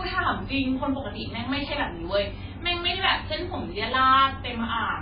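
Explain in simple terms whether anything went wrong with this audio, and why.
MP3 compression, likely, runs through the whole recording from start to finish. The speech sounds dull, with nothing above about 5 kHz, and watery or swirly, because the encoder, starved of data, cut the treble and let faint details flicker in and out.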